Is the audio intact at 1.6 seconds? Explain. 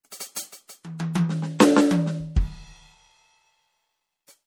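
No. At 1.59 s in this music there is a pre-echo: a short hiss about 11 ms long runs just ahead of a sharp attack, which then sounds soft and smeared rather than crisp. The codec spreads its quantisation noise across a whole transform block, so the noise sized for the loud hit also fills the quiet moment before it. On a waveform, a thin fuzz rises before the transient; on a spectrogram, a faint broadband smudge leads the attack's vertical line.

The cause is likely MP3 compression, which is plainly audible across the whole clip. The watery, swirly quality fits a low bitrate around 64 kbps, where the encoder starves weak frequency lines of bits and they flicker on and off from frame to frame. The highest content reaches about 21.1 kHz. On a spectrogram the upper bands look patchy and speckled, with holes appearing and vanishing frame to frame, and attacks look blurred in time.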